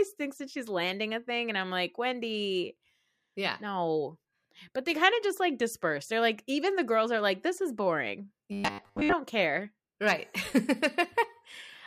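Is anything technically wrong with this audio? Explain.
Yes. From 8.52 to 9.14 s, just after "like this is boring", the speech becomes a rigid metallic buzz near 100 Hz. This is robotic sound from repeated short buffers, likely from audio arriving too late: a 10 ms chunk replays over most of that span, skipping the real speech.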